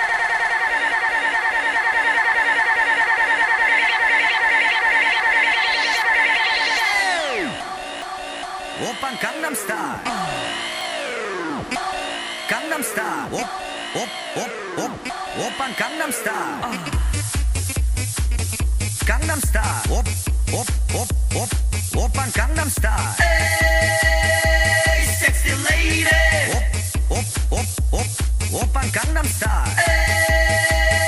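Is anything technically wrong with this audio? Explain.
Yes. At 8.02 s and 10.81 s there is a small jump forward in the sound, about 10 ms gone each time, likely a dropped buffer (overrun), where samples were overwritten before being read. Unlike a dropout, no silent gap is heard.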